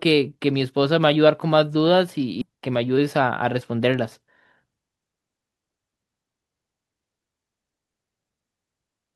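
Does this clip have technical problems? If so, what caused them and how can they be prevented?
Yes. At 2.41 s a stretch of queued speech was dropped and playback jumped forward, a skip ahead. Roughly 0.7 s of speech never plays. Nothing fills the gap, so the sound on either side is spliced almost directly and the talker seems to lurch forward. A larger buffer ceiling with gradual draining, instead of dropping whole blocks, would prevent it.

From 2.97 to 3.72 s the buffer was still holding more audio than its target, so the receiver performed a jitter buffer speed-up, repeatedly cutting out pitch-period-sized slices to shrink the delay. About 50 ms disappears over that stretch, and speech runs at roughly 106% of normal speed while the pitch stays unchanged, giving a brief hurried quality. A steadier network path or a slower, smoother buffer adaptation would prevent this.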